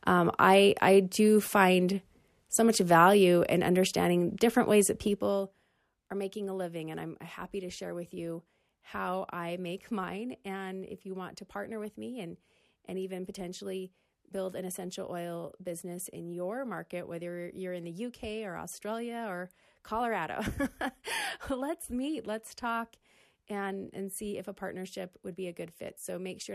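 The clip is speech, and nothing in it is technically wrong.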